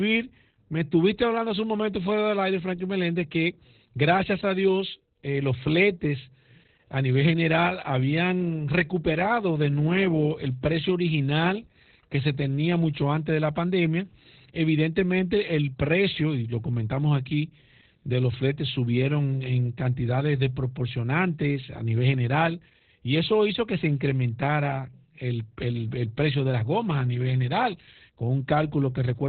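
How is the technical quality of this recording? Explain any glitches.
Technical quality is poor. Opus voice compression runs throughout this speech. Nothing above 4.3 kHz survives, so the voice sounds muffled and hoarse. Coarse linear-prediction coding, consistent with a very low bitrate near 8 kbps, adds a robotic edge.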